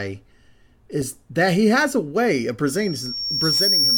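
At 2.66 s the microphone starts picking up the loudspeaker it feeds, and at 5.5 kHz the loop gain passes one, causing loudspeaker feedback squeal. A thin whistle swells over about a second to sit around 5 dB above the speech, continuing to the end.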